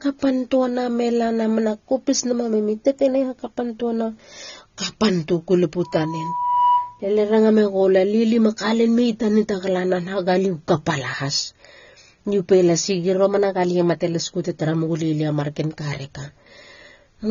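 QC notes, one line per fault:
Throughout, AAC compression: nothing above 6.9 kHz, so the speech sounds dull and smeared. The cause is likely low-bitrate AAC-LC, which fits roughly 24 kbps.
5.83 to 7.01 s, loudspeaker feedback squeal: a 978 Hz tone swells over about 0.7 s to about 5 dB above the speech. The microphone is re-amplifying its own loudspeaker.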